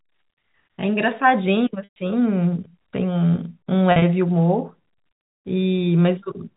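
At 1.84 to 1.96 s the speech holds on a buzzy tone that fades to silence, and at 3.92 to 4.02 s it briefly buzzes. This is packet loss with pitch repetition, where the receiver repeats the last pitch period to cover 120 ms and then about 70 ms of missing audio.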